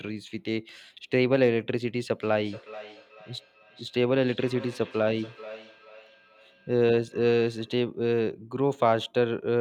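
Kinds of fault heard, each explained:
Feedback echo between two devices: a second device replays this speech into the microphone, so each word returns roughly every 0.4 s, peaking about 19 dB down and thinning with each pass, unlike single room reverb.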